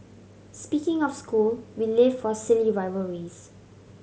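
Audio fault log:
No faults heard anywhere in the speech.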